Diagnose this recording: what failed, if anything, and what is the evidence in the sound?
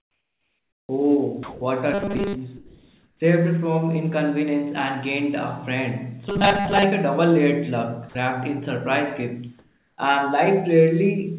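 Comfort noise in place of the background appears from 0.00 to 0.89 s, from 2.57 to 3.20 s and from 9.59 to 9.98 s. In these pauses the real room tone gives way to a smooth, featureless hiss. In the first gap it drops about 15 dB, and in the later two about 2 dB. This is call processing, likely discontinuous transmission. The sender stopped transmitting during silence, and the receiver synthesised noise from occasional spectral updates.

Onset clipped by the voice detector occurs at 0.86 to 0.89 s, losing 30 ms, and at 9.96 to 9.98 s, losing 20 ms. Each time, the sound bursts straight out of the comfort noise with no soft lead-in. The stage is the sender's voice activity detection, which was likely slow to register that sound had resumed. Those opening milliseconds were never sent, so synthetic noise filled the slot instead.

Sound dropped by the voice detector occurs from 1.43 to 1.61 s, where 180 ms vanishes, and from 8.09 to 8.15 s, where 60 ms goes. 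In both, the sound collapses briefly into steady noise and then returns. The mechanism, likely in call processing, is the voice detector misjudging quiet material as background and halting transmission, leaving the receiver to insert comfort noise where real sound should be.

Robotic sound from repeated short buffers runs from 1.93 to 2.35 s and from 6.29 to 6.85 s. The sound turns into a rigid, metallic buzz locked at 200 Hz, while its contour still roughly follows the original. This is a buffer fault, likely starved playout. A 5 ms chunk was looped to cover late data, and most of the real audio in those spans was discarded. Throughout, the band stops at 4 kHz, as G.711 A-law carries nothing higher.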